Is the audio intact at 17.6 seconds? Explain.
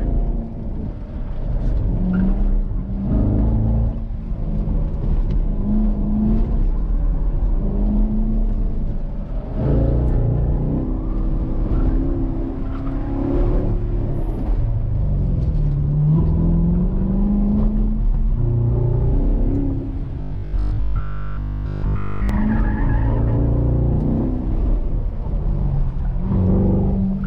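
Yes, at 17.6 seconds the audio is intact, with no dropout, click, distortion or other fault to be heard at that moment.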